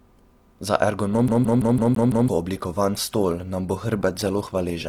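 Adaptive stream at a lower bitrate, from 1.08 s to the end: the stream switches abruptly, with no gap, to a lower-quality version, as a slowed connection forces. Codec artefacts rise, which points to a drop from about 64 to 16 kbit/s Opus.

CD stuck on one turn, from 1.28 to 2.28 s: a scratch throws the laser back to the same spot on each rotation. A 0.17 s fragment repeats six times, with a brief mute at every jump, giving a fast, even stutter.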